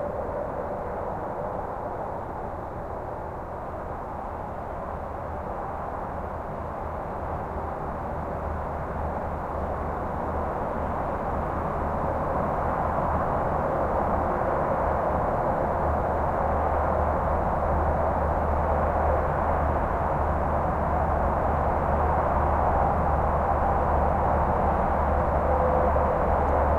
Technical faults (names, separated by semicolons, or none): none